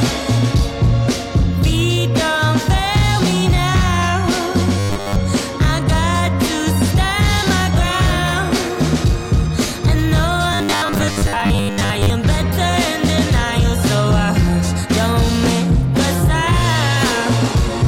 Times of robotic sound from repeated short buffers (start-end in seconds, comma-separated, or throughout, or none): 4.79-5.17, 10.53-12.10